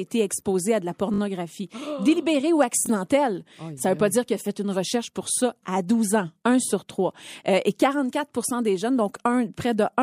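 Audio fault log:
1.14–1.20 s, repeated buffer: the same 20 ms slice of speech plays four times back to back, with a hard join at each repeat. Fresh audio didn't arrive in time, so the device kept replaying its last buffer. Nothing seems to go missing.
2.86–2.88 s, repeated buffer: same thing, just shorter. One 20 ms chunk plays a second time.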